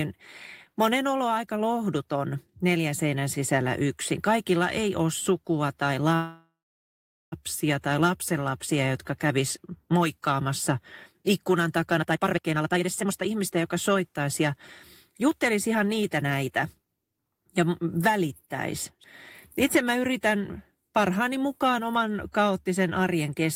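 At 6.15 s, right after "ei ole sukua tai", the speech stalls in a call audio freeze that lasts until 7.34 s. The last sound is stretched into a brief fading buzz, then about 0.81 s of silence, most likely because delayed packets left the jitter buffer empty. Unlike a dropout, nothing is lost: the speech resumes exactly where it stopped, with "tai lapsenlapsia jotka kävis", about 1.17 s late.

Two stretches of jitter buffer speed-up follow, where the receiver trims pitch-period slices to work off the accumulated backlog. From 11.97 to 14.41 s, after "jotka kävis moikkaamassa ikkunan", the speech runs at about 141% speed, shedding roughly a second and sounding noticeably rushed. From 15.10 to 16.86 s a milder 109% speed-up removes a small fraction of a second. In both, pitch stays unchanged, which separates this from a resampling or playback-rate error.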